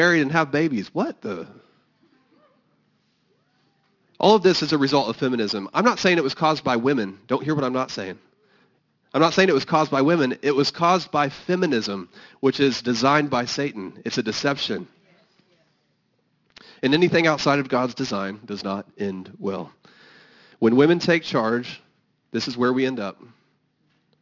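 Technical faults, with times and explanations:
Throughout, aliasing: the speech's sibilants sound gritty and metallic, and the spectrum slams into a hard edge near 6 kHz. That fits an unfiltered drop to 12 kHz, folding the highs back down.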